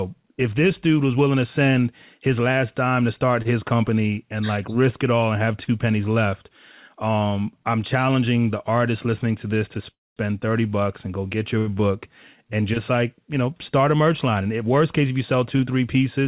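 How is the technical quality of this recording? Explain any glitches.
The recording has two timing glitches. Both come from a call connection. The sound is narrowband, with nothing above 4 kHz, which fits a G.711-style call codec.

Call audio freeze, 9.91 to 10.18 s, right after "listening to this to". The sound briefly buzzes, then drops to silence for about 220 ms. The likely cause is packets held up in transit, so the jitter buffer ran empty. The receiver filled about 256 ms and then resumed where it stopped. Nothing is lost, but everything after it arrives 256 ms later.

Short stall from a late packet, 11.59 to 11.69 s, between "and go get your" and "book and just like". One packet was late. The receiver stretched the last sound for 82 ms until it came. Then playback continued from the same point. No sound is missing. You hear a held-over moment with a faint buzz, and the timing slips by 82 ms.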